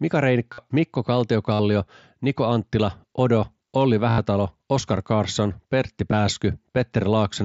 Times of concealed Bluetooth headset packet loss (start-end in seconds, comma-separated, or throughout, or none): 0.53-0.58, 1.53-1.59, 4.11-4.18, 6.12